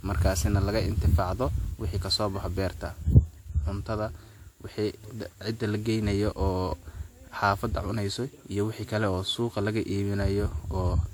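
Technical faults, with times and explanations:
Throughout, generation loss: the speech sounds swirly, smeared and hollow, with blurred consonant attacks, while content still reaches about 20.1 kHz. The likely cause is around seven decode-and-re-encode passes, each requantising on a shifted frame grid, which fits WMA near 96 kbit/s.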